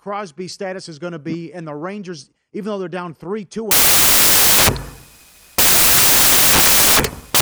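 From 3.71 s to the end of the speech, samples built from the wrong bytes take over: the reader is assembling each sample wrongly, so fast-changing low bits dominate. Unlike ordinary hiss or clipping, it is loud, harsh broadband noise, close to white on the loud sounds.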